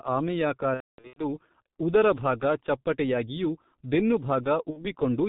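Throughout the speech, the G.723.1 codec at 6.3 kbit/s leaves heavy damage: nothing survives above 4 kHz, and its slowly updated 30 ms voice model blurs consonants, so the voice sounds muffled and hoarse from start to finish.

From 0.74 to 1.25 s, VoIP packet loss concealed by the speech codec removes about 360 ms of audio scattered over roughly 420 ms, with the longest gap lasting 240 ms. The decoder repeats its last pitch and filter with falling gain, so the voice stretches into a buzzy tone or coloured noise that fades. A second, shorter loss between 4.70 and 4.93 s covers about 60 ms, and the voice stays weak for a moment after the gap.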